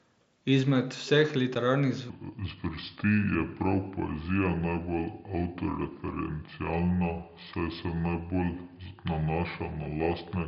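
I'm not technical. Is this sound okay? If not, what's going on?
No. There are two problems.

At 1.55 s there is a tiny gap, about 7.5 ms long. This is unconcealed Bluetooth headset packet loss. The headset sends sound to the phone in very small chunks. Here one chunk went missing, which fits a single lost packet. Nothing was put in its place to cover it. So the sound simply drops out for an instant. The edges are abrupt, so you may hear a click.

From 2.1 s to the end, the section is at the wrong speed. It plays at 0.7 times normal speed, so everything is slower. The pitch drops with it, by roughly seven semitones. The speech sounds deep, heavy and dragged out. This is likely a player or editor using the wrong clock for that part. Speed and pitch changed together, all at once.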